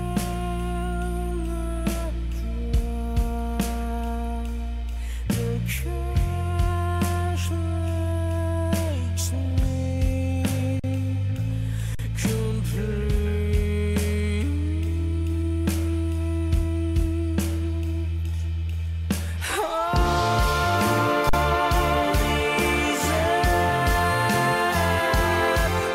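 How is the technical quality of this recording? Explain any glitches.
The recording has three brief dropouts of the same kind. At 10.80, 11.95 and 21.29 s, an underrun with held sample: the output buffer ran empty, so the converter held its last value for about 43 ms, which fits a 2048-sample buffer. The waveform freezes flat, the sound briefly stops, and it resumes where it left off with essentially nothing lost.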